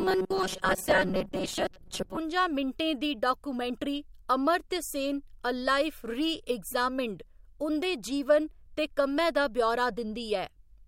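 Robotic sound from repeated short buffers, 0.01 to 2.17 s: a rigid metallic 188 Hz buzz, likely from about half the speech being replaced by repeated 5.3 ms buffers.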